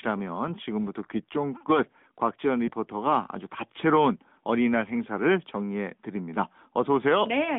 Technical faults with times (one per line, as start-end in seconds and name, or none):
2.66-2.71 lost AMR speech frames